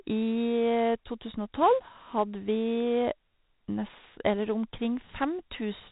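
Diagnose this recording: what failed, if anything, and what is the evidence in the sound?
A gritty hiss rides on every loud syllable from start to finish, rising and falling with the level of the speech, and sharp consonant onsets come out crunched. Nothing is left above about 3.8 kHz, so the whole recording sounds dull. This is a codec fault: heavy 4-bit ADPCM compression, consistent with a 32 kbps stream. Each sample is coded as a coarse step from a prediction, so the error becomes level-following noise, and the adaptive step lags on fast attacks.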